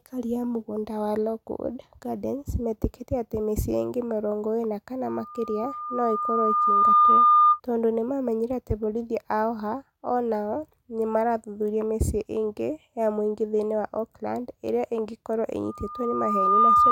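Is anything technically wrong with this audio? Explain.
Yes. Twice a single steady tone near 1.2 kHz swells out of the speech and grows into a shrill squeal that ends up about 10 dB louder than the talking. It is loudspeaker feedback squeal. The first runs from 5.06 to 7.60 s, after "ingĩ mĩrongo ĩna kana", building over about two seconds before "tondũ nĩ mamenyire atĩ". The second starts at 15.64 s after "ĩrĩa ĩngĩkorũo", rises within about a second and lasts to the end. A microphone was picking up its own loudspeaker, and at 1.2 kHz the loop's gain exceeded one, so that frequency kept reinforcing itself.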